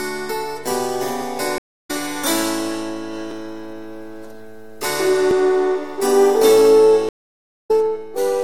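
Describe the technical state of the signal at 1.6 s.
At 1.6 s a stream reconnect is under way (1.58 to 1.91 s). The connection dropped, leaving about 256 ms of silence; a fresh decoder resumes roughly 150 ms further on.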